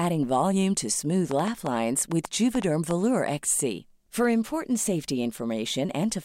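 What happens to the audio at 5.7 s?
Nothing goes wrong at 5.7 s; the speech plays through that moment intact, with no dropout, click or other fault.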